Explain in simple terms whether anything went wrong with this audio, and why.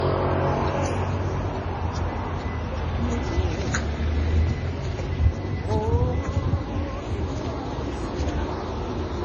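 The sound is dull and smeared from start to end. Nothing is heard above about 10.4 kHz. Two different kinds of digital grit sit on top of each other. That points to transcoding between lossy codecs, likely MP3 first, then Vorbis.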